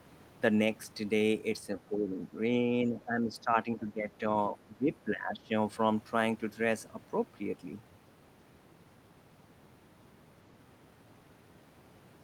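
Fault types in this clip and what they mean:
speech suppressed in double talk: the echo canceller likely treated overlapping talk as echo and turned it down, so the speech dips repeatedly, by up to about 20 dB, between 1.9 and 5.5 s.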